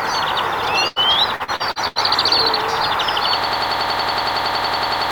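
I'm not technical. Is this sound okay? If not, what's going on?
No, there are three problems.

At 0.87 to 0.99 s there is a burst of packet loss. The audio travels in small chunks, and a short run of them never arrived in time. About 80 ms went missing. The receiver filled the hole by stretching the last bit of sound and letting it fade. You may hear a brief held buzz or hiss. Then the sound jumps ahead, and the missing piece is gone for good.

From 1.36 to 1.99 s there is repeated packet loss, which makes a robotic sound. The same chunk loss happens five times in quick succession. The longest gap is about 79 ms, and about 240 ms is lost in total. Each hole is patched the same way, by stretching the last sound. Those patches fill 38% of this stretch. The result is choppy, with bits missing.

From 3.44 s to the end, at 5.11 s, there is a system hang loop. The computer froze, but the sound hardware kept replaying the same short piece of audio. 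That piece is about 93 ms long, which fits a 4096-sample buffer. It repeats 18 times, about 10.8 times a second. This gives a rapid machine-gun stutter. Roughly one and a half seconds of real sound is lost.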